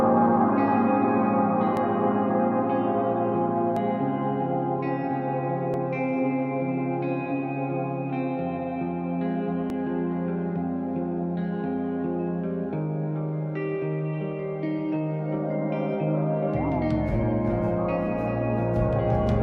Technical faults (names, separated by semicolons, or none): overlap between stream segments; doubled audio track